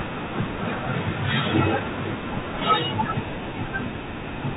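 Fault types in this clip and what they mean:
Bluetooth CVSD headset codec: the one-bit narrowband headset link cuts everything above 4 kHz here, with scratchy s sounds and a grainy hiss under the speech, clearly audible throughout.
Bit errors on a Bluetooth voice link: around 1.81 to 1.92 s, flipped bits at roughly one or two percent add a brief rushing crackle, no sharp clicks.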